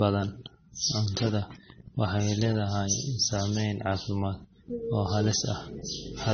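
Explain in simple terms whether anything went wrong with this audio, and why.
The speech sounds muffled the whole way through, with nothing above 6.3 kHz and mixed, smeary artefacts, likely from transcoding between lossy codecs.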